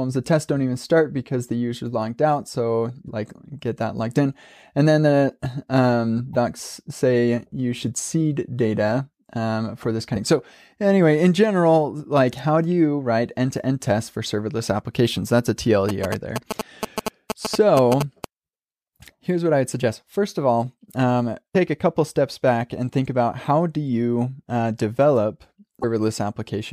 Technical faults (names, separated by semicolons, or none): damaged data in a compressed stream; GSM signalling bursts